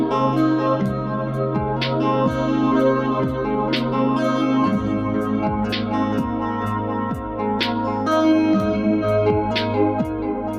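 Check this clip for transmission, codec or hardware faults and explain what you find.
One fault runs through the whole clip: a noise suppressor applied to music or sounds. The suppressor is built for speech, so it treats sustained tones, room ambience and reverb tails as noise and pulls them down, while sharp onsets pass. Held sounds sink by about 5 dB shortly after each attack and tails thin out, giving a fluttering, pumping texture. Unlike compressor or AGC pumping, the dips follow how steady the sound is rather than how loud it is.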